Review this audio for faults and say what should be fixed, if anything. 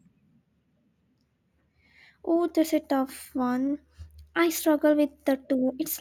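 No faults found in the speech; nothing to fix.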